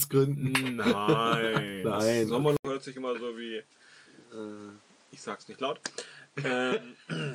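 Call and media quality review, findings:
Input switched to a poorer device, 2.57 s to end: 80 ms dropout, then duller sound, level around 5 dB lower, faint new noise floor. Likely capture path changed to a narrower-band microphone with its own tone and noise.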